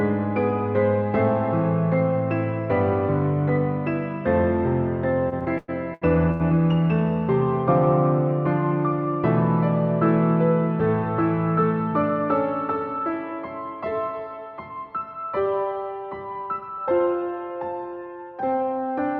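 The audio stutters with repeated stalls from 5.29 to 6.42 s. Packets arrived late, so the jitter buffer emptied six times. The receiver stretched the last sound to bridge each gap, the longest 102 ms. About 305 ms was filled this way, but nothing is lost. A jitter buffer speed-up follows, from 13.91 to 14.84 s at 105% and from 16.47 to 17.14 s at 108%. Too much audio had built up, so the receiver cut tiny pitch-period pieces, roughly 50 and 70 ms in total. The pitch holds, but the sound feels hurried.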